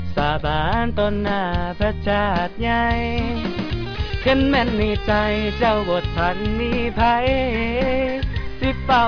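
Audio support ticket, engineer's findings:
Nothing stood out on listening that would call for further investigation.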